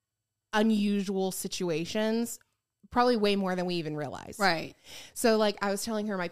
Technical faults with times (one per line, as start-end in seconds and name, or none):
0.00-6.32 sample clock jitter